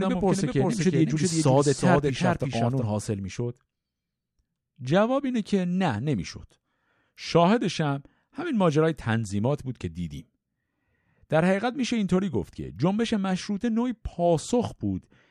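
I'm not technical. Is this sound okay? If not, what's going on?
No: a doubled audio track runs from the start to 2.84 s, where a quieter copy of the speech trails under half a second behind, likely from an editing slip.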